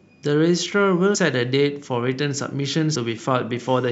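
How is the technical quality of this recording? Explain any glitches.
Two brief glitches stand out. At 1.14 s and 2.94 s, compressed frames are skipped: a few missing or rejected frames, about a tenth of a second of speech each, fitting roughly 26 ms frames. The overlapping frames leave a smeared blip, not a click, visible as a narrow vertical smudge and a small discontinuity in the waveform.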